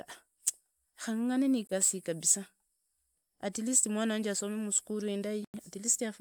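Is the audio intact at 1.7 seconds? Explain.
No. From 1.67 to 1.74 s the speech drops out to about 21 ms of silence, then resumes. This is likely a Bluetooth stall: interference delayed packets, the headphone buffer emptied, and playback halted briefly until retransmitted data arrived.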